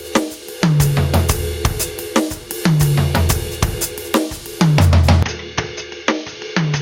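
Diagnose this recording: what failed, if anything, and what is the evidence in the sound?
Gain pumping runs through the whole music clip, with the level swinging by around 15 dB. The likely cause is input gain set far too high at the converter stage, with a fast limiter clamping every peak and squashing the dynamics.

An input switched to a poorer device at 5.23 s, lasting to the end, with no silence at the changeover. Nothing is left above 6.6 kHz, the level falls by about 10 dB, and a new noise floor sits roughly 50 dB below the music. This likely happened at the driver level, where the system swapped to a narrower-band microphone in mid-recording.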